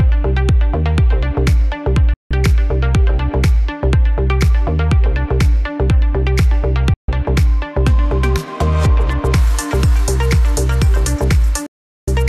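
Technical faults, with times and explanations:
2.14–2.31 s, 6.94–7.09 s and 11.66–12.08 s, digital broadcast dropout: the sound snaps to silence within about 3 ms, stays gone for 168 ms, 144 ms and then 408 ms, and resumes abruptly. The receiver stopped getting valid frames, either from signal loss or failed checksums, and muted rather than play corrupt data until clean frames returned. The gap lengths fit whole frames of about 24 ms each, and the audio from those gaps is lost.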